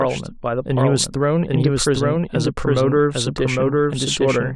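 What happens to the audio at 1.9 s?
At 1.9 s, as through the whole clip, the speech is heard twice: an identical, equally loud copy trails about 0.7 s behind, dry and full-band. This doubled audio track likely comes from a second, slower capture path mixing the same signal back in.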